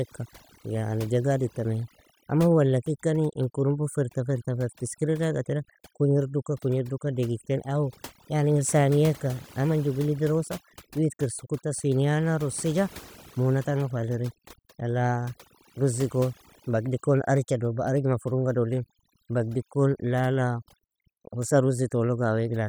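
A speech recording with overdone noise removal throughout: the background drops to near silence speckled with twinkling artefacts. On a spectrogram, isolated bins flicker on and off between words, while quieter speech detail is carved away into ragged gaps.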